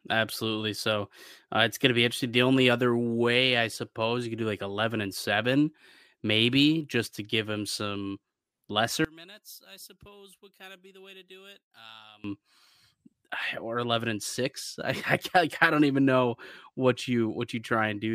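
One channel inverted, from 9.05 to 12.24 s in this speech recording: the level falls by about 25 dB and the centred voice nearly disappears, leaving a faint residue. The likely cause is one stereo channel flipped in polarity, so the shared centre content cancels when summed to mono.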